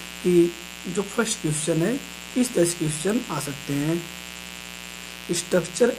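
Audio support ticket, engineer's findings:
Steady raspy buzz throughout. Mains buzz, 60 Hz family, well up, roughly 15 dB under signal. Probable dimmer, rectifier or unshielded lead injecting switching spikes twice per cycle.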